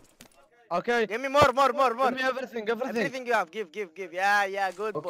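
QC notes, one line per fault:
No faults found in this clip. Nothing in the audio calls for a QC entry.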